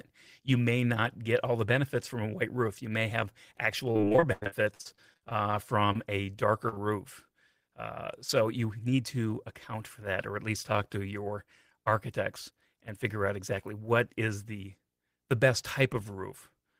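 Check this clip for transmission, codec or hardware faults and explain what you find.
Several network faults affect this speech clip: one stretch of repeated packet loss, three short concealed losses, and two jitter buffer time adjustments in opposite directions.

Repeated packet loss (robotic sound) runs from 3.91 to 5.55 s, right after "roof you may have". Packets went missing again and again. Each time, the receiver patched the hole by extending the last sound, only to hit another hole soon after. About a third of the stretch is concealed, and the longest single gap is about 93 ms. The result is choppy, with pieces missing. What separates it from isolated loss is the chain of patches, one after another rather than a single blip.

Short concealed packet loss occurs at 5.93–5.97 s, and again at 6.69–6.74 s and 6.74–6.78 s, where two losses sit back to back. Each is a hole of a few hundredths of a second that the decoder filled by continuing the preceding sound and then blending back into the real audio. 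Each one is heard as a brief smear or wobble, and a short consonant may drop out. Unlike the robotic stretch, each event stands alone and ends quickly.

A jitter buffer slow-down follows at 5.97–6.37 s. With its reserve low or its target delay just raised, the receiver repeated single pitch periods and bits of pause. This added about 39 ms and played the audio at 93% of normal speed. The sound is drawn out, but the pitch stays the same, which is what distinguishes it from a tape-style speed change.

A jitter buffer speed-up runs from 8.71 to 9.01 s, between "uh so" and "to account for that". Here the buffer held surplus audio, so the receiver cut out pitch-period-sized slices, about 40 ms in total. Playback runs at 112% and sounds hurried at unchanged pitch. It is the mirror of the slow-down: time is removed rather than added.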